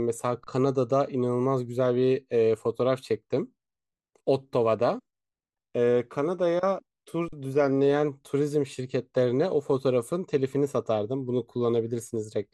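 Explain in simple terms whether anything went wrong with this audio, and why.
Twice the speech briefly freezes: an underrun with held sample at 0.44 to 0.47 s and 7.28 to 7.33 s. Playback ran dry, held its last level flat, then resumed where it left off.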